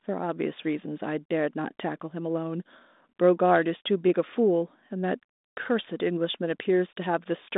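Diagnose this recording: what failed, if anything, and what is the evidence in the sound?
Nothing failed here; no faults.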